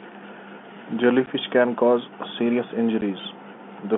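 At 1.26 s and again at 3.01 s, the stream drops a packet and the receiver fills the gap with silence rather than concealing it. Each hole in the speech lasts 10 ms, which fits the loss of a single packet. The signal cuts to nothing and resumes abruptly, with hard edges. This packet loss filled with silence sits on top of the narrow telephone band from the G.711 coding.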